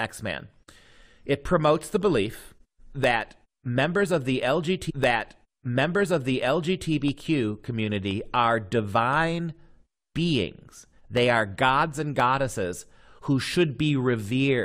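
From 0.99 s to 14.25 s, periodic USB or driver dropouts recur every 1.02 s, about ten in all. Each time a tiny slice of audio, well under a millisecond, is replaced by silence as the driver stalls, producing regular ticks heard only over active speech.

At 4.89 s a stream segment is repeated: the player queued the same stretch twice, so about 2.0 s of speech, running to 6.89 s, plays again. A small blip marks the jump back where the duplicate segment begins.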